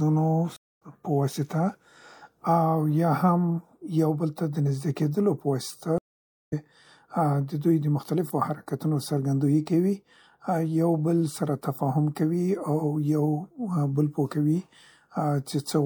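At 0.56 s and again at 5.98 s the speech cuts out in a stream reconnect: the connection dropped and a fresh decoder restarted mid-stream. Gaps of 0.24 s and 0.53 s appear as flat waveform and blank spectrogram, and speech resumes skipped ahead by roughly 150 ms and 300 ms respectively.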